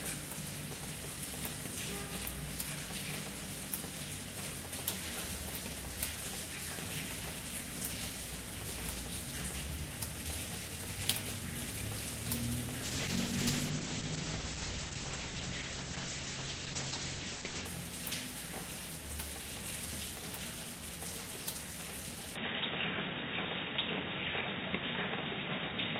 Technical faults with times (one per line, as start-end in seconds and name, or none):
12.84-17.71 call bitrate drop
22.36-26.00 input switched to a poorer device